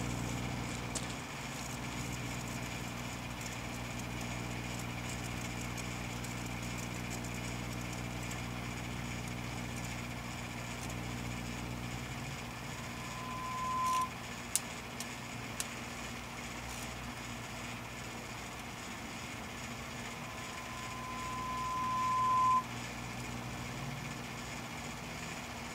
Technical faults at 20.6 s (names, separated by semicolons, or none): loudspeaker feedback squeal